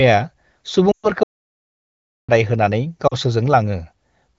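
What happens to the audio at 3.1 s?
Lost AMR speech frames from about 3.07 to 3.15 s, roughly 40 ms (which fits two dropped frames), make the decoder repeat and fade its last good settings, leaving a brief drop to near silence.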